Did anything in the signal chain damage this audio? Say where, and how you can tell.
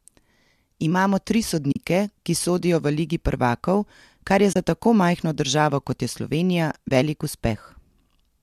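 Yes. AAC frame loss with muting, at the codec and network stage. Soft gaps appear at 1.72–1.76 s, before "ki sodijo v ligi". Another falls at 4.53–4.56 s, between "ligi prvakov kar je" and "za tako majhno državo". A third is at 6.89–6.91 s. Their 40, 30 and 20 ms lengths point to lost 10 ms frames that the decoder zeroed. The overlapping windows fade the sound out and back in.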